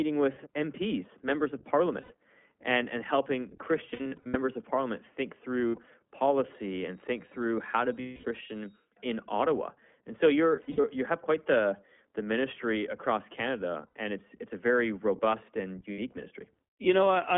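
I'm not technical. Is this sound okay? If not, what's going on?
No. Throughout, the speech sounds thin, muffled like a phone call, and slightly rough and robotic. That is the iLBC codec, which squeezes the audio and discards everything outside roughly 200 Hz to 3.4 kHz.

There are also brief buzzy, held-vowel smears at 2.00–2.12, 3.90–4.37, 5.68–5.88, 8.00–8.26, 10.56–10.86, 13.88–13.91 and 15.92–16.00 seconds. These are lost iLBC frames: parts of the stream went missing, and the player repeated the last bit of speech to cover each gap.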